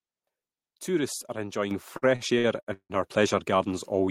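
At 1.71 s the speech and the background noise under it suddenly jump up together by about 6 dB, an abrupt step rather than a natural swell. This is a microphone volume stepped up: the call software judged the input too quiet and raised the device's capture gain in a single move, so everything the microphone picks up, room noise included, becomes louder at once and stays there.

From about 1.97 s to 2.92 s the speech drags and catches, hanging on sounds in five separate stalls that together stretch roughly 0.38 s, with the longest holding for about 165 ms. That is repeated stalls (stutter). Packets arrived late or more slowly than they were played out, so the jitter buffer kept running dry. Each time, the receiver prolonged the last sound to cover the wait, so around 40% of that stretch is filled-in audio even though nothing is actually lost.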